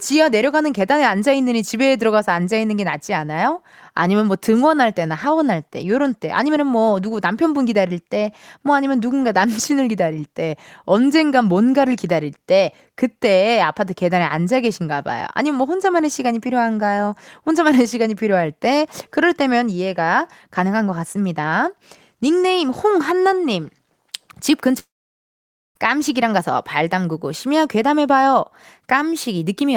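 Around 24.79 s the speech drops out for nearly a second, likely a long network dropout: a brief fading buzz, then about 0.9 s of silence until 25.78 s, with that audio gone.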